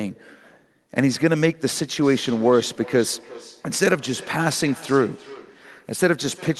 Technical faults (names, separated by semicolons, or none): feedback echo between two devices